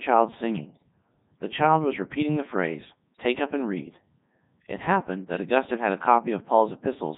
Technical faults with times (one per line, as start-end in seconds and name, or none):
0.00-7.18 Codec 2 vocoder
0.82 bit errors on digital voice radio
3.15 bit errors on digital voice radio
5.34-5.45 bit errors on digital voice radio